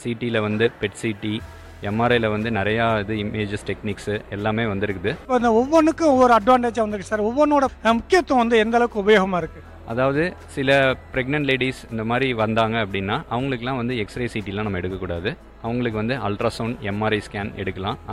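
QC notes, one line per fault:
No technical faults are audible anywhere in the signal.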